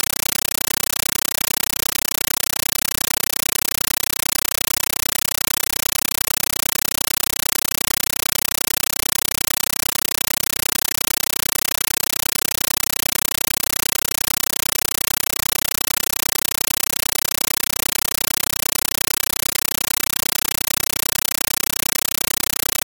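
Throughout, loud chattering static in 9.33 ms bursts repeats 31.25 times a second: a compressed stream played as audio, undecoded frames that fit 448 kbps AC-3.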